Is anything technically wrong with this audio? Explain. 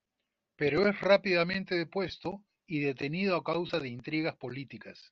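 Yes. There are lost LE Audio frames at 0.50 s, at 2.08 to 2.10 s after "es rápidamente" and before "y detenido a", and at 3.66 to 3.70 s just after "y detenido a". Each gap is briefly filled by the decoder, which repeats the last spectrum with scrambled phase. The result is a short noisy smear in the speech. The first two gaps are about 15 ms, which fits two 7.5 ms frames. The last is about 30 ms and sounds longer.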